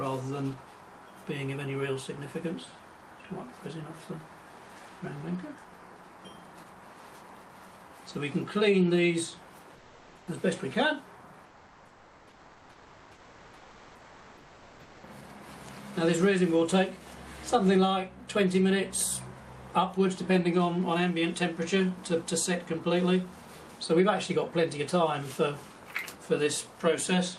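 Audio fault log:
9.75 to 10.27 s and 11.45 to 15.03 s, comfort noise in place of the background: for about 0.52 s and then 3.58 s, the real background between loud passages, about 28 dB down, gives way to a smooth, featureless hiss about 2 dB quieter. This is likely Opus discontinuous transmission, with the receiver synthesising noise during the pauses. On a spectrogram, textured background becomes an even, static wash. On the waveform, the floor flattens into uniform low-level fuzz with a slight step down.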